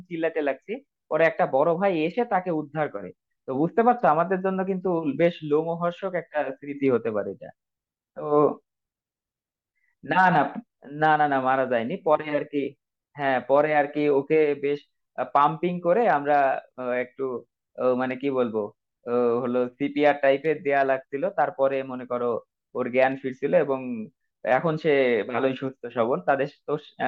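No technical faults can be heard anywhere in the recording, which stays stable and intact throughout.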